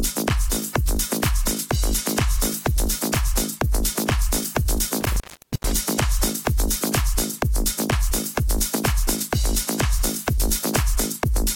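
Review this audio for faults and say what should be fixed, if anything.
Between 5.01 and 5.82 s the sound drops out or breaks up, with crackle marking the edges of the disturbance and the line open for about 0.44 s in total. This is an intermittent contact: a loose plug, worn jack or damaged cable briefly loses its connection, so the signal is interrupted, and each make and break of the metal contacts produces the crackle. Re-seat or replace the suspect cable and connectors, secure them with strain relief, and check connections before recording.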